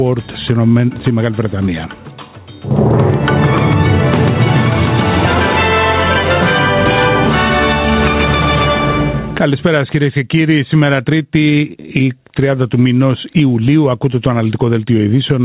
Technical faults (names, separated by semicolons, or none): gain pumping